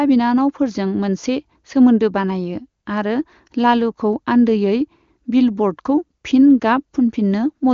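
No technical faults can be heard in the speech, which comes through the AMR wideband (HD Voice) codec at its top rate of 23.85 kbit/s, with the band ending near 7.2 kHz as that path normally does and any coding damage no more than faint.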